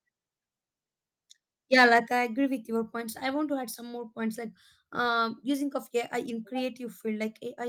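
From 1.73 to 1.98 s, just before "I agree with", the loudest syllables turn harsh. Their peaks sound flattened, with a crackling, gritty edge. This is microphone overload. The likely cause is an input level set too high, driving the signal roughly 4 dB past the converter's ceiling. The tops of the waveform are sliced off, so only a small fraction of samples is affected. That is enough to make the distortion audible on those peaks.

At 2.07 s, right after that distorted stretch and again just before "I agree with", the whole signal drops in level at once. The voice and the background fall together by about 6 dB. There is no gradual fade. This is the microphone volume being stepped down. The call software likely reacted to the preceding overload and cut the device's input gain in a single step.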